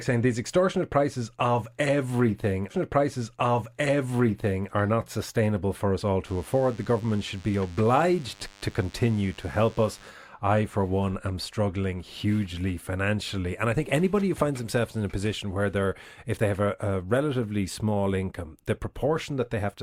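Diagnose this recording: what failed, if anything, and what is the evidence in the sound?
Playback or streaming stage: a stream segment repeated. After "extortionate prices of everything", the audio from 2.70 s to 4.70 s plays again, adding 2 s before "are not sustainable for" resumes, with a small blip at the jump back. The player queued or fetched the same chunk twice. Unlike a stutter or a looping buffer underrun, the repeat is a full, clean two-second block that plays once and then continues, not a short fragment cycling.

Analogue wiring, from radio interference: a DECT cordless phone buzz runs from 6.27 s to 10.1 s, between "sustainable for us all" and "I for one am". It is a thin, raspy buzz at 100 Hz, sitting faint beneath the speech. Its repeat rate matches a DECT transmitter bursting every 10 ms, with the bursts rectified by the audio circuitry. Mains hum can also sit at 100 Hz, but it sounds rounder and is continuous, whereas this buzz is spiky with dense harmonics.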